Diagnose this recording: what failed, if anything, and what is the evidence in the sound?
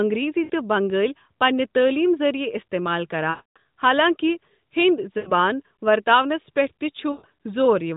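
Network stage: lost AMR speech frames at 0.44–0.51, 3.30–3.58, 5.18–5.32 and 7.12–7.26 s. The decoder stretches and fades the preceding sound rather than cutting to abrupt silence.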